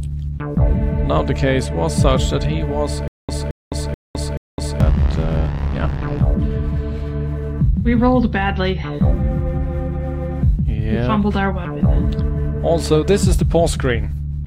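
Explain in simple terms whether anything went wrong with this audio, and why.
The playback likely stalled and kept retrying, causing a stutter with silent gaps from 3.08 to 4.80 s. The same 0.22-second burst repeats four times, each followed by 0.21 seconds of dead silence, so the sound that should have played is lost.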